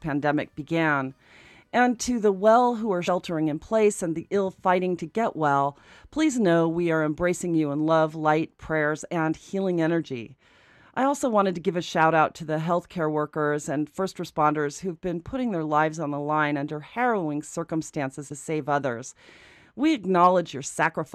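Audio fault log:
3.07 s and 18.30 s, compressed frames skipped: the speech jumps ahead by roughly 70 ms, then 50 ms, fitting a few lost 23.2 ms frames.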